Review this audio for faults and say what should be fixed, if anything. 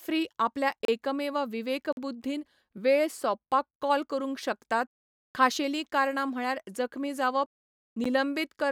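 Three blocks of digital silence cut in at 0.85–0.88 s (32 ms), at 1.93–1.97 s after "आपल्या एकमेव" (46 ms, fitting a 2048-sample buffer), and at 8.04 s after "कारणां म्हळ्यार जखमी जावप" (12 ms, fitting 512 samples). The output buffer likely went unfilled, so the sound drops to silence with no fade rather than a softened dropout. To prevent this, give the audio thread larger buffers or higher priority so it always fills the output in time.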